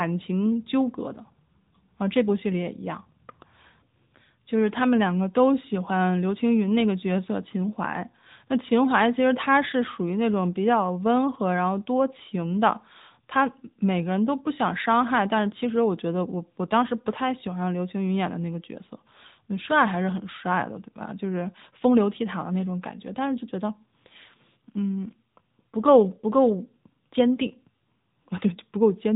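From start to finish the speech carries the sound of an AMR narrowband mobile codec. Nothing above about 3.8 kHz survives, so sibilants lose their edge and the speech sounds boxed-in and telephone-like. The codec rebuilds each 20 ms frame from a vocal-tract model excited by a few pulses, and the damage is plainly audible as a buzzy, synthetic texture. The degree of coarseness points to a mid-range AMR-NB mode of around 10 kbps.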